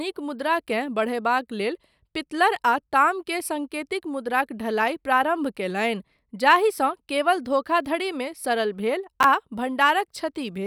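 At 9.21 to 9.24 s, just after "केवल धोखाधड़ीमे सरल भेल", chunks out of order: one block of about 11.6 ms was delivered late and played two blocks after its proper place, so the three blocks in that span come out scrambled. No audio is missing, but the reordering creates three hard joins where the waveform jumps abruptly. The result is a brief jumbled flicker in the speech, lasting about 35 ms.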